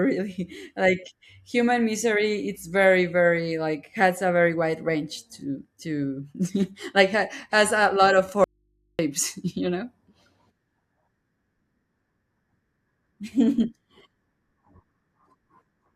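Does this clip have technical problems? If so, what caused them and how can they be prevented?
Yes. From 8.44 to 8.99 s the speech cuts out abruptly for about 0.55 s, leaving only a faint mains hum roughly 45 dB below the voice: an audio dropout to a faint residue, likely from a momentary signal break while the input stayed live and open. Securing cables and connectors and monitoring the input during recording would prevent it.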